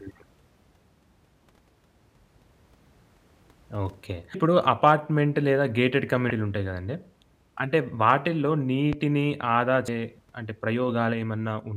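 At 4.31 to 4.35 s, 6.27 to 6.31 s and 9.85 to 9.88 s the speech breaks into a brief chirp or squawk, each about 30 ms long, from damaged data in a compressed stream. Corrupted bytes leave the decoder unable to read those frames, so it loses sync and hunts for the next valid header, producing a garbled burst. On a spectrogram each shows as a thin vertical smear or blocky patch breaking the harmonic bands. On the waveform it appears as a short discontinuity.

At 8.93 to 8.96 s a single loud pop sits on top of the speech, which continues beneath it. It peaks about 10 dB above the surrounding signal, most likely from a sudden voltage step such as a switch, plug contact or static discharge, shaped by the downstream circuitry. The waveform shows one tall, narrow spike, and the spectrogram shows a bright full-height vertical line.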